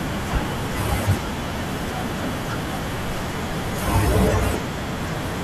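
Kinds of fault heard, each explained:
Overlap between stream segments: two segments carried overlapping time stamps, so the player discarded a sliver of sound that had never actually been doubled. Roughly 3 ms vanishes and the waveform jumps across the gap, heard as a tiny click or skip in the speech at 4.54 s.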